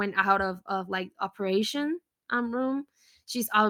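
Nothing here calls for comment: the speech runs its whole course without a single dropout, glitch or other fault to point to.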